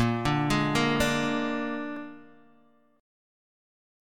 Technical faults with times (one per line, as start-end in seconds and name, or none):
0.97-3.97 clock drift buffer slips